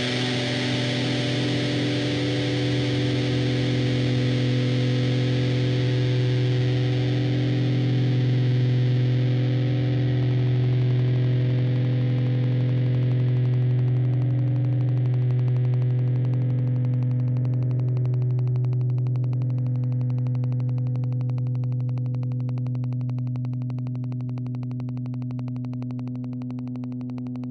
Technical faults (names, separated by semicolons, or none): train of clicks